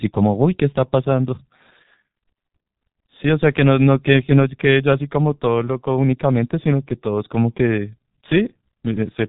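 From start to finish the speech carries heavy G.723.1 codec damage. The voice is muffled and hoarse, and consonants smear together. Nothing is passed above 3.8 kHz, and the slow, frame-by-frame voice model is consistent with the 6.3 kbit/s mode, so detail between updates is lost. On a spectrogram the energy stops flat at 3.8 kHz with empty space above. Harmonics look blocky and smeared rather than cleanly striated.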